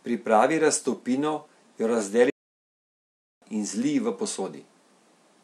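At 2.30 s the speech drops to silence for about 1.1 s, resuming near 3.41 s roughly a second further on: a stream reconnect with a freshly started decoder.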